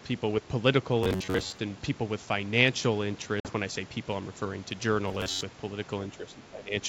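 From 1.03 to 1.62 s the speech turns into a rigid, metallic buzz near 94 Hz. This is robotic sound from repeated short buffers. Audio likely arrived too seldom, so a chunk of about 10.7 ms was replayed while most real sound was skipped.

At 3.40 s comes packet loss on an ADPCM call. A hard-edged gap of 50 ms opens, which fits a handful of lost packets. The decoder's predictor then falls out of step, so the speech returns by 3.52 s slightly distorted.

The same robotic buzz returns from 5.08 to 5.41 s, again pitched near 94 Hz.

From 6.18 to 6.75 s there is speech suppressed in double talk. Both ends were likely talking, and the echo canceller turned the talker down too. The voice dips by about 10 dB over roughly half a second. Through all of this the G.722 wideband coding keeps speech clear up to about 7 kHz.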